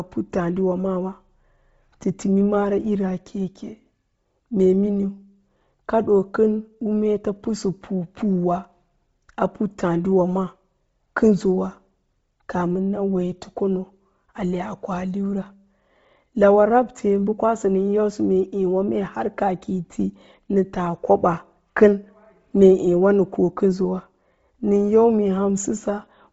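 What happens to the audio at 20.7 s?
At 20.7 s the speech carries the same damage heard throughout: a hard ceiling near 7.7 kHz, with grainy, breathy hiss filling the upper band. A spectrogram shows blank space above that line and smeared, noise-textured bands below. This points to heavy Bluetooth LC3 compression at a low rate, likely around 24 kbps, in short 7.5 ms frames.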